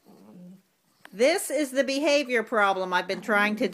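No technical faults are audible.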